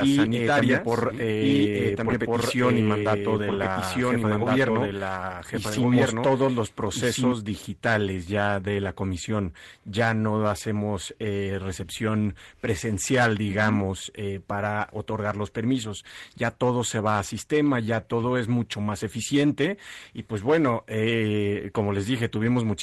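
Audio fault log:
0.00–7.32 s, doubled audio track: already under way when the clip opens, a second full-band copy runs roughly 1.5 s behind at about the same level, then stops abruptly. It is likely a second capture path or misaligned edit. Unlike echo or reverb, it has no decay and no room colour.
3.47–3.57 s, 5.69–5.83 s and 19.07–19.09 s, lost packet rebuilt from error correction: short stretches of 60, 80 and 20 ms turn rougher and noisier with no gap, fitting lost packets replaced by low-bitrate copies carried in the following Opus packets. Unlike ordinary concealment, there is no dropout, fade or repeated buzzy segment.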